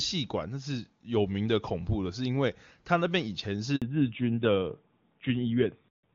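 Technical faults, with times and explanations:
3.76–3.82 s, handover gap: the call is passed from one network to another, and for 60 ms no speech frames arrive. The voice dies away within a few tens of milliseconds and stays silent until the new link takes over, so whatever was said in that stretch is lost.
3.82 s to the end, fallback to narrowband: after the switch the call drops from HD Voice to an older narrowband codec. Nothing above 4 kHz survives, so the speech turns dull and rougher, which fits AMR-NB at 7.4 kbit/s replacing the clean 23.85 kbit/s AMR-WB heard before.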